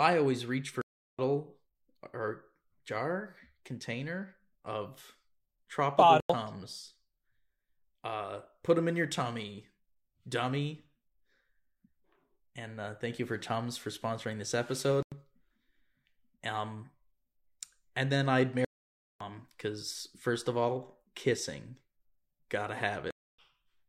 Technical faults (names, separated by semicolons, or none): corrupt frame muted